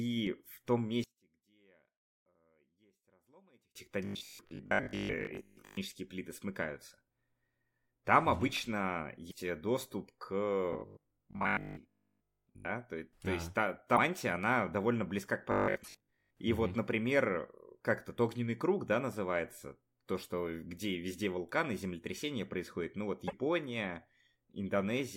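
From 1.04 to 3.75 s the level drops by about 33 dB and what remains is a faint copy. This is the one-channel-inverted pattern: one stereo channel likely has reversed polarity, so the shared centre content cancels when the channels are summed to mono.

Robotic sound from repeated short buffers occurs from 4.05 to 5.77 s, from 10.73 to 12.67 s and from 15.52 to 16.31 s. Each stretch becomes a rigid metallic buzz at 50 Hz that only loosely follows the sound. The likely cause is a starved stream repeating the last 20 ms of audio while most of the real signal is skipped.

Broken MP3 bit reservoir events appear at 9.30 to 9.34 s, 13.96 to 13.98 s, 15.83 to 15.88 s (inside the third robotic stretch) and 23.27 to 23.33 s. Each causes a brief jump in the audio with a chirp, noise burst or dropout of a few tens of milliseconds. This fits 24 ms MP3 frames that likely reference reservoir data from frames that were cut out.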